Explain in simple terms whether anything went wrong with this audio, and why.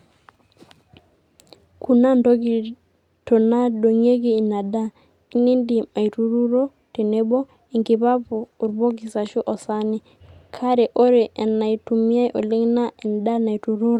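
Listening to the recording, nothing stood out as having gone wrong anywhere in the speech.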